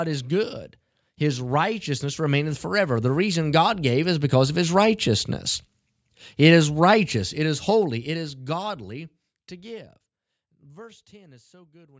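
Just after "is good", automatic gain rising lifts the level by about 11 dB from 1.18 to 5.34 s, then by about 6 dB from 6.37 to 8.87 s. The control is boosting quiet input, so voice and background swell together rather than the voice alone getting louder. The second rise overlaps the gentle closing fade.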